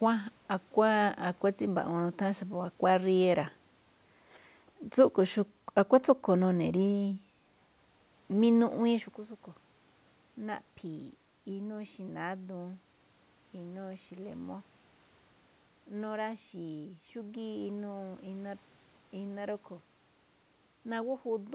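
Nothing stood out on listening; the background room sound and the change in level around 9 s as the talker shifts position belong to the recording itself.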